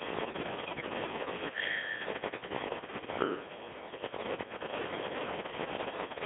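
Throughout, the speech carries the Codec 2 vocoder sound, band-limited to about 200 Hz to 3.6 kHz. The decoder rebuilds the voice from sine waves using only pitch, voicing, energy and spectral envelope, so it sounds heavily robotic and buzzy, consistent with roughly 1.6 kbit/s.

From 0.66 to 0.94 s, bit errors on digital voice radio strike a handful of frames at an error rate of a few percent. Corrupted pitch, level and voicing parameters make the synthetic voice jump, warble and break into bleeping gibberish.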